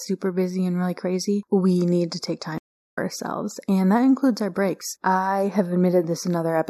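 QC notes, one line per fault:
Throughout: channel delay (comb filtering). One channel lags the other by roughly 0.15 ms, only a few samples, and the mono sum cancels shared content at evenly spaced frequencies. The first notch falls around 3 kHz, so the speech sounds hollow and phasey in the upper range.
2.58–2.99 s: stream reconnect. Right after "we need to take" the audio drops to silence for about 0.38 s as the connection breaks and a fresh decoder starts. Playback resumes roughly 0.2 s further into the speech, so a short stretch is skipped.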